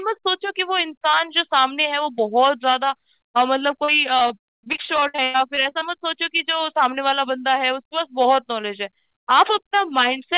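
Speech over a narrowband call path with nothing above 4 kHz, showing repeated packet loss (robotic sound) from 3.84 to 5.83 s: gaps up to about 0.1 s, each patched by extending prior audio, leave roughly 28% concealed and choppy.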